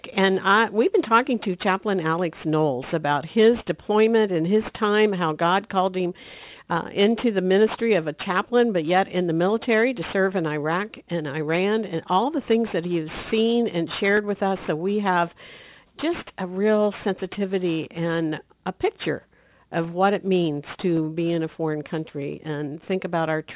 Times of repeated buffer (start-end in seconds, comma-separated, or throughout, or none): none